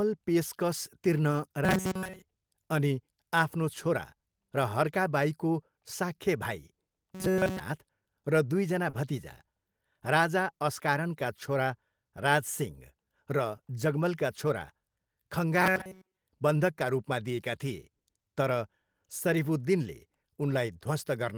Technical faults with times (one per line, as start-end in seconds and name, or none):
1.31-1.33 lost packet rebuilt from error correction
1.64-2.22 robotic sound from repeated short buffers
7.15-7.60 robotic sound from repeated short buffers
8.89-8.95 short concealed packet loss
8.93 lost packet rebuilt from error correction
14.47 lost packet rebuilt from error correction
15.62-16.23 robotic sound from repeated short buffers
20.49 lost packet rebuilt from error correction